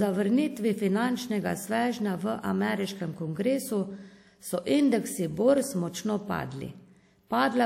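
At 5.58 s a loud pop cuts into the speech: two sharp pops in quick succession, ending by 5.66 s, which rise a few decibels above the surrounding level while the speech carries on underneath. The likely cause is a sudden voltage step or pulse entering the signal path, from a plug, a switch, a static discharge or a driver glitch, which the downstream circuitry then shaped into these brief transients.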